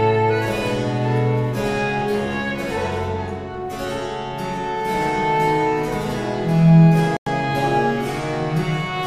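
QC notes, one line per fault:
7.17–7.27 s, Bluetooth stall: the audio drops abruptly to silence for about 98 ms, then returns without a fade-in. A gap this short and clean points to a likely wireless dropout: interference delayed packets, the receiving buffer emptied before retransmissions arrived, and output halted until data resumed. The sound then picks up again after the gap.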